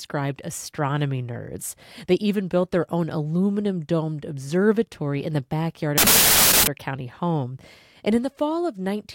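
From 5.98 to 6.67 s, just after "observatory in the backyard", 16-bit audio is read as packed 24-bit samples, a wrong sample width. Bytes from neighbouring samples merge into garbage values, so loud hiss buries the speech, which comes through 1.5 times too fast and raised in pitch.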